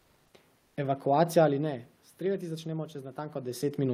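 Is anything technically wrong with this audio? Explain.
Yes, there are three faults in this speech clip.

Comfort noise in place of the background appears from 0.00 to 0.33 s and again from 0.57 to 0.77 s. The likely cause is discontinuous transmission, such as Opus DTX: the sender stopped transmitting during the pauses, and the receiver filled them with synthetic noise. The real background, sitting about 41 to 42 dB below the loudest speech, becomes a flat, characterless hiss, about 1 dB quieter in the first gap and about 4 dB quieter in the second. On a spectrogram these stretches look smooth and evenly textured, without the fine irregular detail of the surrounding room noise.

The onset is clipped by the voice detector from 0.75 to 0.77 s, right where that second comfort-noise stretch ends. The detector was likely slow to register that speech had resumed, so about 20 ms at the start of the sound was never sent and was covered by synthetic noise. 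The speech therefore begins abruptly, with no gentle rise. On the waveform the envelope jumps straight from the low noise floor to the speech level, and on the spectrogram the energy appears as a hard vertical edge.

Automatic gain rising runs from 2.24 s to the end. The input level fell by about 12 dB, and the gain control responded by gradually turning its gain back up. Voice and background therefore swell together over more than a second. On the waveform the envelope climbs steadily, with the noise floor between syllables rising along with it. On a spectrogram the whole band, background included, darkens gradually toward the end.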